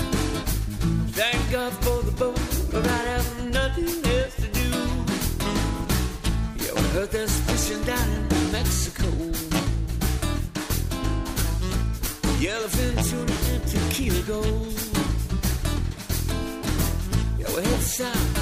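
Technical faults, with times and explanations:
Nothing technical goes wrong here at any point, so there's nothing to flag.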